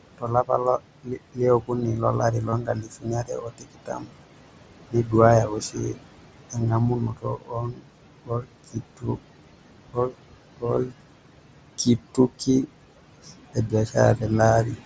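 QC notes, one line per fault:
Throughout, noise suppressor artifacts: the suppressor pulls down every band it judges to be steady noise, by about 21 dB, frame by frame, so the room noise, itself about 11 dB under the speech, drops away in pauses and surges back beneath each phrase.
0.18–4.17 s, 4.91–9.23 s, 9.93–10.93 s and 11.78–14.78 s, speech cut by the noise suppressor: the suppressor mistook quieter parts of the speech for noise and turned them down with the background, by up to about 22 dB. Soft consonants and word endings sound swallowed, for roughly two seconds in each of the first two stretches and more briefly in the last two.
2.49–2.53 s, 7.04–7.07 s and 10.76 s, concealed Bluetooth headset packet loss: audio from the headset failed to arrive, so the receiver kept repeating the closest-matching piece of the last 20 milliseconds or so. The first two gaps, each about 30 ms, fill with a short buzzy held tone and a small warble as real sound resumes. 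The 7.5 ms gap at 10.76 s is almost hidden.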